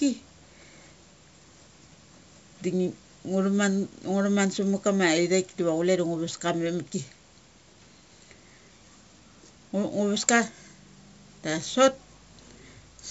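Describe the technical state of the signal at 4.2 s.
At 4.2 s the speech is intact and carries no fault, passing through the usual G.722 wideband telephone coding at 64 kbit/s, with its band ending near 7.7 kHz.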